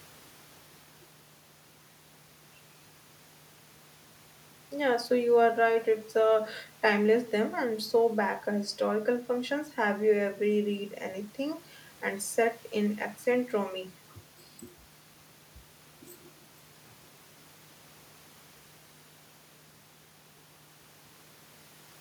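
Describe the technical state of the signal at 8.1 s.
At 8.1 s the speech signal is intact, with no audible technical fault at that point.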